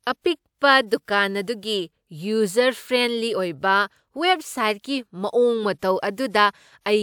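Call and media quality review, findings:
No faults found in this speech recording.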